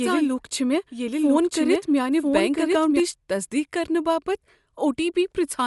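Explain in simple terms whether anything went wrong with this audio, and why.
From the very start until 3.0 s, a second, quieter copy of the speech trails about a second behind, then cuts off abruptly. This doubled audio track likely comes from the same sound being recorded twice.

Throughout, the speech has a grainy, breathy edge, and everything above about 11.6 kHz is missing. That points to Bluetooth LC3 compression, which likely drops and fakes the top end to save data.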